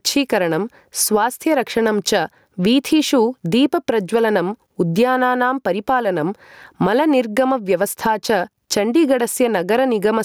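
Gain pumping runs through the whole speech recording. The gain swings by around 15 dB, leaving loud and quiet passages squashed toward one level. The likely cause is input gain set far too high, with a fast limiter clamping down on each peak. On a waveform, the envelope looks flattened.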